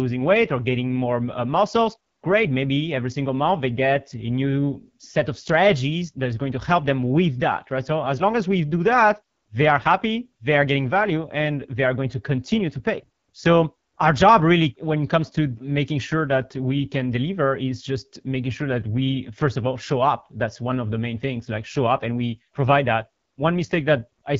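From start to finish the speech carries the signature of the AMR wideband (HD Voice) codec pushed down near the bottom of its range; the roughness points to one of its two lowest rates, around 8.85 kbit/s. The codec models speech below 6.4 kHz as pulses fed through a vocal tract filter and fills the 6.4 to 7 kHz band with shaped noise. At this rate the pulse coding is too coarse, so the speech comes out plainly rough and raspy all the way through.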